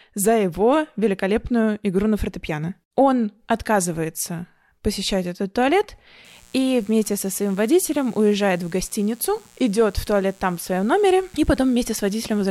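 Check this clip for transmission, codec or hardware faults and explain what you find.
One hardware fault is present: mains buzz. It starts at 6.25 s and runs to the end at 12.51 s. Interference enters twice per 60 Hz cycle, spraying harmonics into the kilohertz range. It sounds like a steady, raspy buzz, roughly 30 dB below the speech.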